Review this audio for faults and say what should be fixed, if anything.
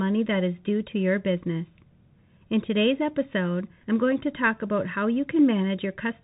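Throughout the clip the speech sounds muffled and cut off above about 3.8 kHz, with scratchy s sounds and a granular hiss. These are the marks of the Bluetooth CVSD headset codec, whose one-bit, step-adapting coding fits a 64 kbps link. To prevent it, record on a wideband headset profile or a wired microphone instead of the narrowband Bluetooth call mode.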